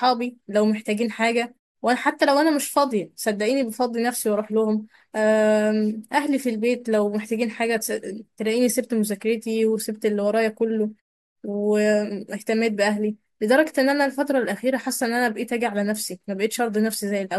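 The clip is speech, and nothing is technically wrong with it.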